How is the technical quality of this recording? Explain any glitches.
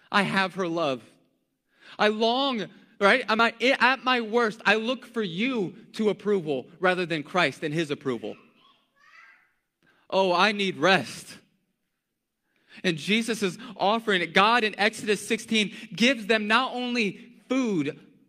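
The speech is marred by three tiny skips at 3.39, 9.37 and 15.38 s. They recur every 6 s. This is overlap between stream segments: overlapping timestamps make the player discard a few milliseconds of real audio, so the waveform jumps.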